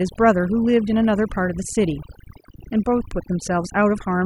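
Overdone noise removal runs throughout. Bands near the noise floor are cut too hard. Pauses collapse into twinkling near-silence, and quiet parts of the speech are lost with them.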